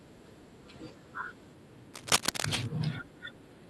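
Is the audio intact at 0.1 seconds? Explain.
Yes, the speech at 0.1 seconds is intact, with no fault at that moment.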